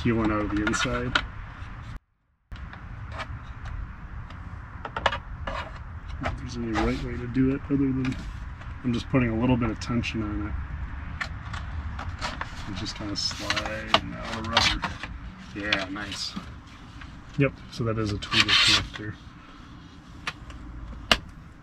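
The signal path likely lost its wanted input for just over half a second while the chain after the break stayed live, producing an audio dropout to a faint residue from 1.97 s to 2.52 s. The sound cuts out abruptly rather than pausing or fading, and for about 0.55 s only a faint leak of it remains, roughly 30 dB below its normal level, before it returns just as suddenly in mid-flow.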